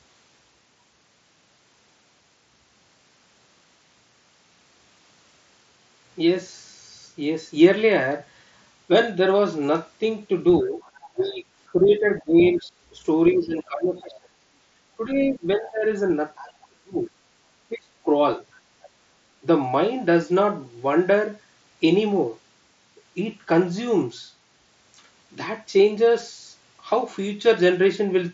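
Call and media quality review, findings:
Speech suppressed in double talk, 10.62–14.37, 14.98–17.11, 17.7–18.07 s: talker dips up to roughly 30 dB during overlap; echo canceller likely attenuating both near talker and echo.

Other side's voice leaking through, 10.66–11.33, 12.2–12.5, 13.33–13.37, 16.36–16.67, 18.82–18.88 s: faint far-end scraps about 20–30 dB down, likely residual loudspeaker echo the canceller missed; band-limited near 7.7 kHz by the wideband headset path.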